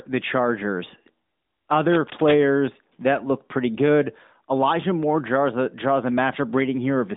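From 1.88 to 2.45 s, just before "that look pretty good", a burst of cable scratch noise sits over the speech: dense, irregular crackling and rustling at roughly 10 dB below the speech level, lasting a little over half a second. The likely cause is a worn cable, connector or control being moved, its contact resistance jumping about rapidly and injecting erratic noise into the signal. The speech arrives through a narrowband mobile codec with nothing above 3.8 kHz.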